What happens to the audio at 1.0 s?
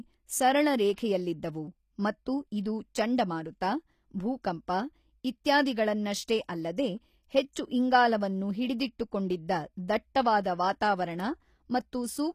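Just before 1.0 s, from 0.96 to 0.98 s, a brief hiss rises out of silence ahead of a sharp onset. This is pre-echo: the codec spreads quantisation noise across a whole transform block, so noise scaled for the loud attack also fills the quiet moment before it, smearing the onset over about 20 ms. Unlike a click or dropout, it is a soft noise that leads into the attack rather than a break after it.

That moment sits inside audio carrying plainly audible damage that is likely from HE-AAC compression at a bitrate consistent with around 24 kbps, with nothing above 15 kHz. The treble is rebuilt by copying lower bands upward, so s sounds come out gritty or lispy and metallic. This differs from a simple low-pass, which would leave the top dull, and it is present throughout the sound rather than only at this one moment.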